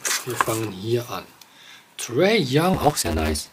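A block size mismatch (truncated) runs from 2.73 to 3.52 s. One stage writes blocks longer than the next reads, which fits 512-sample blocks being cut short, so each block's tail is discarded. The sound carries a 150 Hz buzz and plays 1.6 times faster with its timbre intact.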